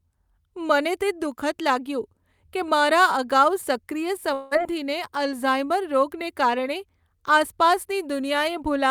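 Right after "અગાઉ સક્રિય", from 4.33 to 4.53 s, the speech smears into a fading buzz for about 0.18 s, likely a long network dropout, then resumes with that piece gone.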